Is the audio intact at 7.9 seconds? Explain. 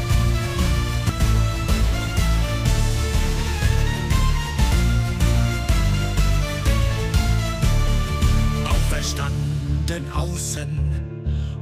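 No. At 7.87 s there is a compressed frames skipped fault. Several whole frames never reach the output, so playback jumps forward by roughly 0.4 s, which fits about four frames of 92.9 ms each. The sound jumps ahead abruptly at the join. On a spectrogram the texture changes abruptly at that instant.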